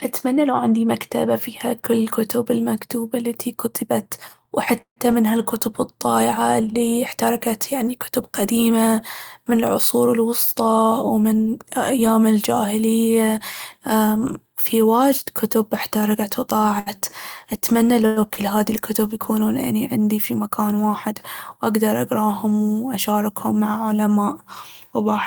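At 4.81 to 4.99 s, just before "من هالكتب الضايعة الي", a call audio freeze, likely from held-up packets, stretches the last sound into a fading buzz or hiss with about 90 ms of silence. On a spectrogram the harmonics smear flat and then go blank. From 16.09 to 16.40 s, after "أمم في واجد كتب", a jitter buffer speed-up trims roughly 50 ms in small pitch-period cuts, so the speech runs about 13% fast at unchanged pitch, with slightly compressed syllable spacing in the waveform. A short stall from a late packet at 16.79 to 16.89 s holds a sound for 69 ms, which shows as a flat, repeated stretch with a slight buzz or dip. A second call audio freeze at 18.06 to 18.19 s sustains the sound for 101 ms as a decaying buzz or hiss with no silent gap. Another short stall at 18.34 to 18.39 s, just before "هاذي الكتب يكونون أني", adds a brief 19 ms hold.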